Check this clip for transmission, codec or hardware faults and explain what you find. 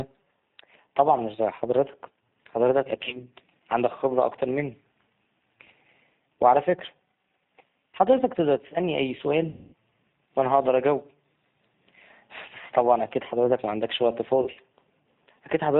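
Two faults are present: a low-bitrate speech codec across the whole recording, and three bursts of lost packets.

The G.729 codec at 8 kbit/s carries the speech throughout. It rebuilds each 10 ms frame from a filter, pitch predictor and a few pulses and drops everything above 4 kHz, so the speech sounds dull, rough and plainly synthetic.

VoIP packet loss concealed by the speech codec occurs three times:
3.04 to 3.25 s, after "مش زي حضرتك حضرتك" and before "عندك خبرة أكتر مني"
9.50 to 9.74 s, after "تقدر تسألني أي سؤال"
14.42 to 14.59 s, after "أكيد حضرتك معندكش وقت"

Each time, the decoder filled the missing frames by extending its last pitch and filter with falling gain. At 3.04 s, about 70 ms is missing in short gaps spread over 100 ms. At 9.50 s, about 230 ms is missing in one block. At 14.42 s, about 90 ms is missing, scattered over 160 ms. The sound smears into a fading buzz or coloured noise, and stays weak briefly afterward.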